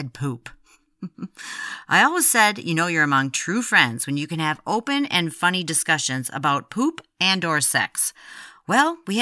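No technical faults can be heard anywhere in the speech recording.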